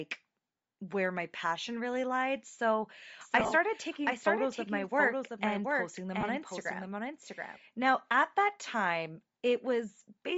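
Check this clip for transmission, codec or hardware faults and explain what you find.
The clip has three faults: coarse codec processing throughout, a doubled copy of the speech for a few seconds in the middle, and two brief dropouts.

Bluetooth LC3 compression runs through the entire clip, plainly audible as a breathy, grainy edge on the voice. The sound likely passed through the LC3 codec at a low rate, around 32 kbps. At that rate the encoder discards much of the upper spectrum in each short frame and fills the gaps with synthetic noise. On a spectrogram the high band looks mottled and patchy rather than showing clean harmonic detail, with blocky texture at regular intervals consistent with 10 ms frames.

A doubled audio track appears from about 3.21 s to 7.57 s. A second full-band copy of the speech trails the original by around 0.7 s at about 5 dB lower level, so each phrase is heard again shortly after. 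It likely comes from a second, slower capture path or a misaligned edit. The copy has no room decay. On the waveform it begins and ends abruptly, and the spectrogram shows each syllable's pattern repeated a fixed distance later.

Lost LE Audio frames occur from 3.40 s to 3.53 s and again at 6.21 s. In the first event, about 70 ms of audio is missing in scattered gaps across roughly 120 ms, with the longest run near 30 ms. The second is a single 20 ms gap. The decoder fills each gap by reusing the previous spectrum with randomised phase, so voiced sound turns briefly into a hissy smear. The spectrogram shows short vertical bands of diffuse noise where harmonic lines break off.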